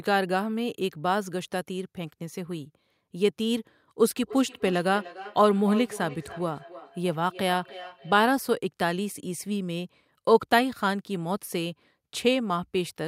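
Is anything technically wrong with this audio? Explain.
Yes. From 4.02 to 8.29 s there's feedback echo between two devices: a second device replays the speech into the mic, so words return roughly every 300 ms, about 15 dB down.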